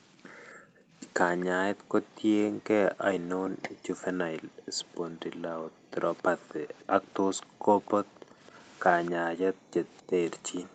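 Speech recorded through a call, and from 0.55 s to the end the echo canceller is gating the background, clamping the microphone down hard whenever the loudspeaker plays, so the room sound dips and drops out by as much as about 40 dB before coming back. From 1.4 to 2.2 s and again from 6.18 to 10.38 s, a faint copy of the speech trails it by about 263 ms, sitting well below the main signal. This is likely an echo leak, with the echo canceller failing to remove all of the loudspeaker sound its microphone caught and sending that residue back down the line. The call's microphone processing also limits the audio to nothing above 8 kHz.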